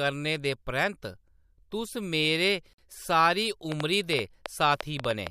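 A speech recording with two separate faults. At 2.73 to 2.78 s, right after "तुस मेरे", a gap at a join of encoded pieces cuts a hole of about 49 ms into the speech. The edges are smeared, and the speech resumes exactly where it stopped, so nothing is missing. That distinguishes it from a dropout, which loses material. The silence comes from encoder delay and last-frame padding left in when separately encoded pieces, about 4 s long, were joined untrimmed. From 3.72 to 5.28 s, after "तुस मेरे सारी", a train of clicks sits on top of the sound: roughly ten similar-shaped pulses at an uneven pace of about 5.8 per second, peaking about 15 dB above the speech. Their repeated, much-the-same shape and presence regardless of what the speech is doing set them apart from codec artefacts or random crackle. The likely cause is electrical interference from nearby equipment or a faulty connection or power supply.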